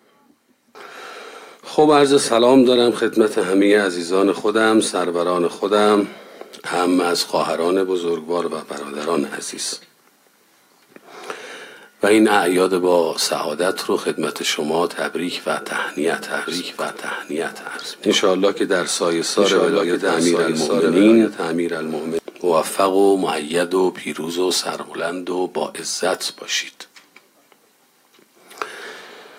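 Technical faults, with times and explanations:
16.23–22.19 s, doubled audio track: a dry, full-band copy trails about 1.5 s behind at roughly 5 dB lower, cutting in and out abruptly, likely from a slower second capture path.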